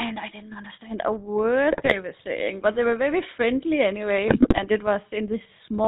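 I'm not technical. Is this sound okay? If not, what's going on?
No. The whole clip has gone through the old GSM full-rate codec, a mobile-phone voice coder that discards everything above 4 kHz and leaves speech sounding buzzy and gravelly. GSM bit errors cause squawks and gargling at 1.72 to 1.96 s, right after "I didn't understand a", and at 4.28 to 4.66 s, after "very friendly anyway", where corrupted data distorted the decoded voice.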